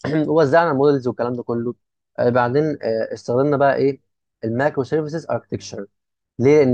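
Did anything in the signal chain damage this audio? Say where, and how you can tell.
No, the speech shows no audible damage from any stage of the signal chain.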